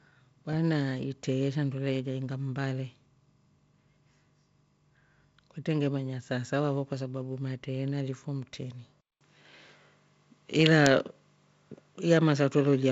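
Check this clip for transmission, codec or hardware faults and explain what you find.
One fault is audible: an input switched to a poorer device, likely the cause of the change at 9.01 s, just after "fo mtrini", lasting to the end. A 200 ms silence marks the switch. The tone then changes, the level shifts by roughly 5 dB, and a new noise floor appears about 50 dB below the signal. This fits a different microphone with its own response and self-noise taking over mid-recording. The G.722 wideband coding path can be heard throughout as a band limit near 7.8 kHz.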